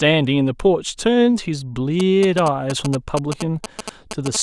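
GSM signalling bursts run from 2.00 to 4.37 s: a nearby 2G phone exchanging short radio bursts with the network is rectified by the audio circuitry, producing a galloping dit-dit-dit of short 217 Hz buzzes roughly 10 dB below the speech.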